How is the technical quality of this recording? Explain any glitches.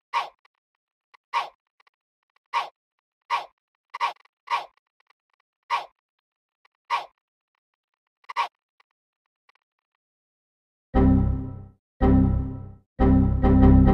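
The technical quality of the recording is sound, with no glitches to explain.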